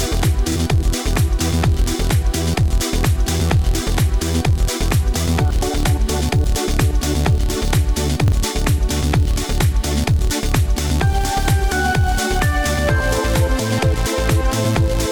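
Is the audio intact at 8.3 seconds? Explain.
No. A repeated buffer at 8.28–8.32 s replays the same 40 ms piece once more with a hard join, a brief stutter rather than a silent dropout.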